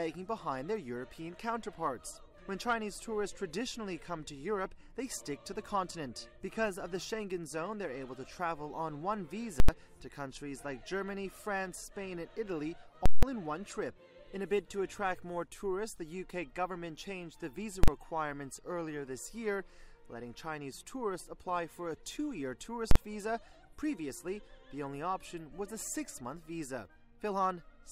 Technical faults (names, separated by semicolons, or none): invalid numbers at full scale